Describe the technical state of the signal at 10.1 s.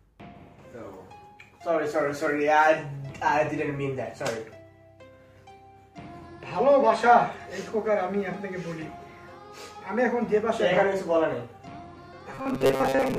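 At 10.1 s the signal is intact, with no technical fault audible at that point.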